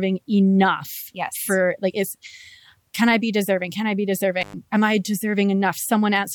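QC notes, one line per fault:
4.42–4.54 s, intermittent contact: the speech drops out for about 109 ms, bracketed by crackle as a loose cable or plug breaks and then remakes the connection. While the contact is open, the signal is gone, so faint hiss fills the gap.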